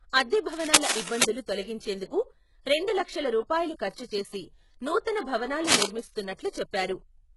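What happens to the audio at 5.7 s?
A worn cable or connector was likely shifted from 5.67 to 5.87 s, its contact resistance jumping rapidly and injecting dense, uneven bursts of noise. This is heard as cable scratch noise, a brief scratching rustle sitting a few decibels above the speech.

Underneath, and throughout, the speech has been squeezed hard, likely by HE-AAC compression at a very low bitrate. The codec rebuilt the treble from copied lower bands, so the damage is heavy, sibilants turn gritty and metallic, and nothing remains above 11.5 kHz.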